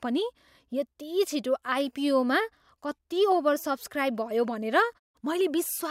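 No technical faults can be heard anywhere in this speech recording.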